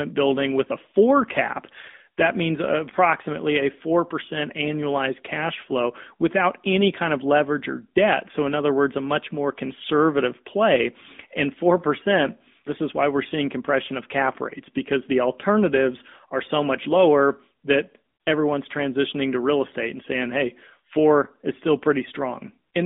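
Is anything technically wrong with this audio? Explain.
Yes. AMR narrowband mobile codec damage runs throughout: the speech is squeezed into a phone band of 200 Hz to 3.6 kHz, nothing above 3.8 kHz, and rebuilt from a vocal-tract model fed by sparse pulses, giving a plainly buzzy, synthetic edge consistent with a mid-rate mode near 10 kbps.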